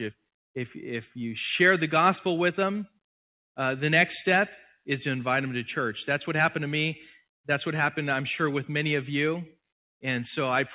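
No technical fault can be heard in this audio. It has passed through a call path whose narrow telephone band stops at 4 kHz, which fits G.711 mu-law coding, and through microphone processing that trims the lowest bass, both as expected for a call.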